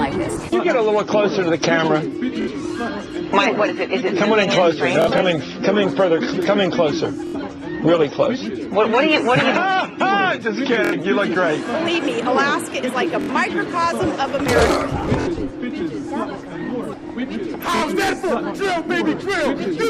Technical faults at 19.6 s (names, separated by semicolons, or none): none